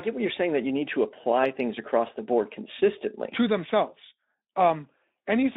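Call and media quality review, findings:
No faults found in this speech clip. The Speex path at 15 kbps is audible as a 200 Hz to 3.7 kHz telephone-width band with light coding texture.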